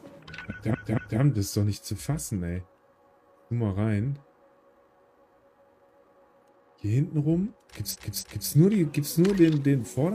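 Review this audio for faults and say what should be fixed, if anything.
Repeated frames occur twice. At 0.70 to 1.16 s, a block of about 232 ms plays three times in a row, which fits a run of five compressed frames. At 7.90 to 8.47 s, a block of about 279 ms also plays three times, which fits six frames. Each time the decoder is handed the same data again, so the sound stutters. The clip runs about 1 s longer than it should. To prevent this, check frame sequence numbers when writing or sending, and drop duplicates.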